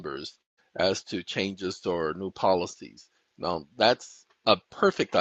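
From 0.41 to 0.59 s the sound smears into a fading buzz, then falls to near silence for about 150 ms before resuming with about 160 ms of audio missing. This is likely a long network dropout that the receiver tried to paper over.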